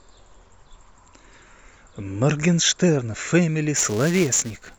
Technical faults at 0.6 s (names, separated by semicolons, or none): none